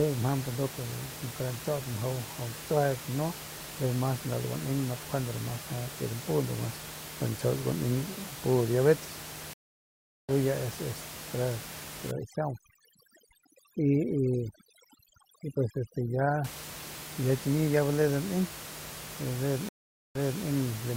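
At 9.53 s a stream reconnect breaks the audio. The connection drops and the player goes silent for about 0.75 s. It then restarts decoding mid-stream, and the speech resumes at 10.32 s about a second further on, so a stretch of it is skipped. On a waveform this is a flat gap, with the audio fading back in after it. A spectrogram shows a blank vertical band, and the speech pattern does not line up across it.

From 12.11 s to 16.44 s, overdone noise removal takes over. The room noise sits about 12 dB below the speech, and the reducer is set so hard that it shuts individual frequency bands whenever they drop near its noise estimate. The background drops and breaks up into twinkling specks, and the quieter parts of the speech are stripped away. A spectrogram shows scattered isolated dots where a smooth noise floor should be, and the speech harmonics are ragged with holes.

A second stream reconnect begins at 19.69 s. 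After about 0.46 s of silence the audio picks up again at 20.43 s, but this time from a point about 280 ms earlier. That brief stretch of speech is heard twice. The waveform shows another flat gap followed by a repeated segment, which a spectrogram makes visible as a duplicated pattern.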